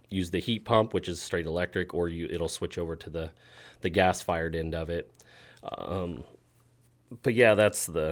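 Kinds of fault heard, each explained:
Nothing stood out on listening to the speech.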